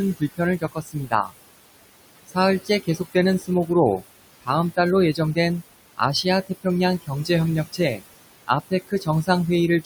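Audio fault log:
Throughout, noise suppressor artifacts: the room noise, about 14 dB below the speech, is pulled down by about 20 dB in the gaps and comes back under the speech, so the background pumps.
0.19–1.34 s, 2.27–4.03 s, 4.42–4.78 s, 5.97–6.66 s, 7.02–7.30 s, 7.73–8.03 s, 8.47–9.29 s, speech cut by the noise suppressor: quiet speech parts are mistaken for noise and attenuated by about 13 to 20 dB, from roughly half a second down to a tenth, leaving endings and soft sounds swallowed.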